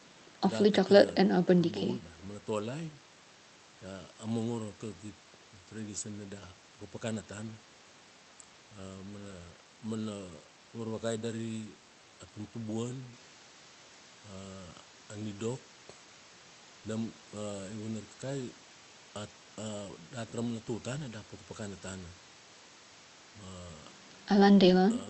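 No technical faults are audible.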